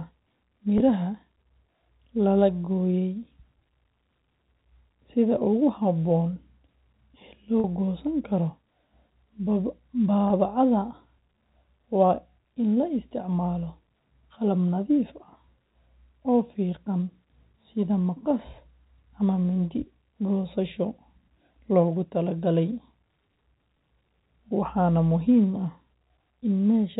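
Packet loss with pitch repetition occurs at 0.78 to 0.80 s, 7.60 to 7.64 s and 10.28 to 10.30 s. Audio went missing for about 20 ms, 40 ms and 20 ms. The receiver filled each gap by repeating the last pitch period, which fits one, two and one lost 20 ms packets. Each gap sounds like a brief buzzy hold on the sound. The longer one ends just before "goosan karo", within the 4 kHz telephone band of the G.711 coding.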